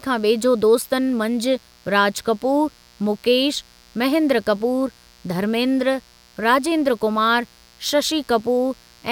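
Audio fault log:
Throughout: mains buzz, a steady raspy drone about 30 dB below the speech, built on 60 Hz with harmonics reaching several kHz from sharp switching spikes twice per cycle. Unlike plain hum, a smooth low tone, its bright edge carries well above the fundamental.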